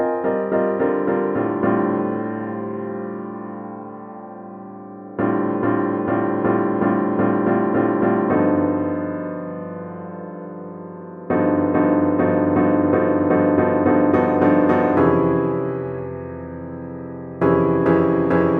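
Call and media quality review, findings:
No faults found across the recording.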